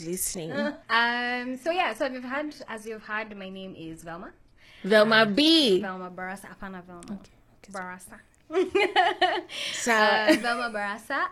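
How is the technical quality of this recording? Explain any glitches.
The recording has one fault: an adaptive stream starting at a low bitrate. From 0.0 to 6.0 s the player was playing a low-bitrate version, which points to something like 16 kbit/s HE-AAC, before switching up to a richer stream, likely around 96 kbit/s AAC-LC. During those first six seconds nothing is heard above 12.4 kHz, the top end sounds thin or synthetic, and codec artefacts are stronger. At 6.0 s the quality jumps abruptly, without any gap.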